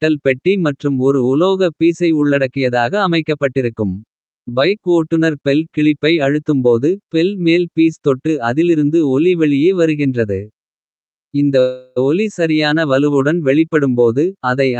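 At 11.59 s a call audio freeze stretches the sound with a fading buzz until 11.98 s, likely because delayed packets emptied the jitter buffer. Nothing is lost: audio resumes intact at "ஒலி சரியான வலுவுடன்", running about 0.37 s later.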